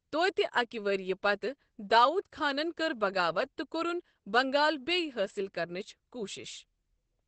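From start to end, the speech sounds muffled and hoarse. Nothing is heard above about 8.6 kHz, so the top is cut away. The damage is heavy. The cause is likely Opus compression at a very low rate. The muffled, hoarse quality points to the speech (SILK) mode, which the encoder switches to when bits run short. The dull, rasping result fits a wideband setting at around 12 kbps.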